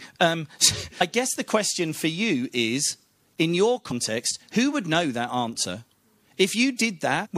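At 1.00 s, just before "I guess the question", the speech is briefly broken by damaged data in a compressed stream. The corrupted bytes are misread by the decoder, which loses frame sync and searches for the next valid header. The same fault recurs briefly from 3.90 to 3.92 s, between "you is in your" and "who would know that", and once more at 7.25 s near the end.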